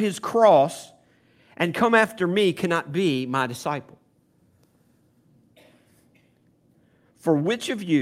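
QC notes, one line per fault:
No technical faults are audible anywhere in the recording, and the signal stays continuous.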